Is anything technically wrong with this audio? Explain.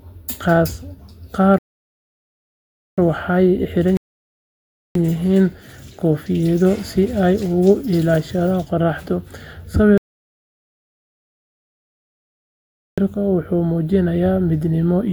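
Yes. The speech is interrupted by three rebuffering stalls, at 1.58 to 2.98 s, 3.97 to 4.95 s, and 9.98 to 12.98 s. In each one the player used up the audio it had downloaded and paused until more data came in. The sound cuts to silence and then carries on from exactly where it stopped, with nothing skipped. Each stall only adds dead time: about 1.4 s, 1.0 s and 3.0 s.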